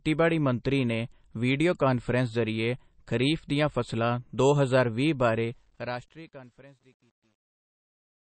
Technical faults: MP3 compression; truncation distortion on a fade

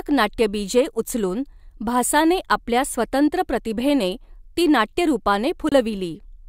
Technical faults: Bluetooth dropout

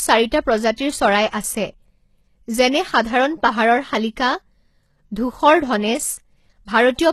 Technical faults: HE-AAC compression; pre-echo

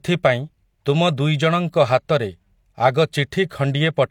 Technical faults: low-bitrate audio saved at a high bitrate

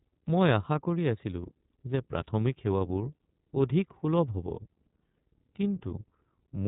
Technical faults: iLBC codec

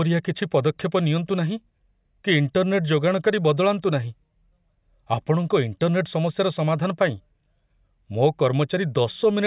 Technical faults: none

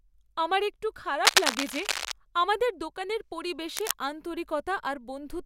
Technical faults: cable scratch noise

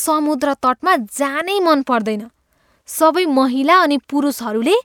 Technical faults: none

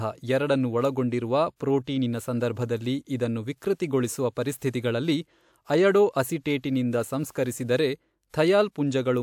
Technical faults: pre-echo

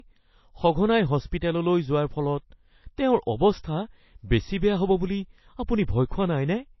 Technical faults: low-bitrate audio saved at a high bitrate

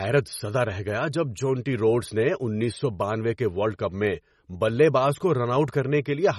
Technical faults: MP3 compression

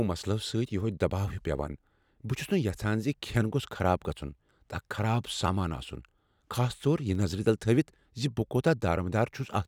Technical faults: word clock ticks

